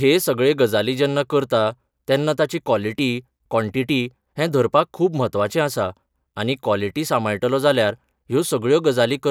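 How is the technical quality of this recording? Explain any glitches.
The technical quality of this recording is good, with no glitches to explain.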